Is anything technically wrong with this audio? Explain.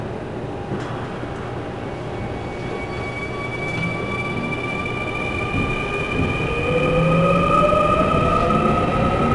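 Yes. Throughout the clip there is audible 4-bit ADPCM compression: each sample is coded as a coarse 4-bit step from a prediction, leaving gritty hiss riding on louder passages and roughness on sharp attacks. Nothing sounds above about 10.7 kHz, which fits a bitrate near 89 kbps.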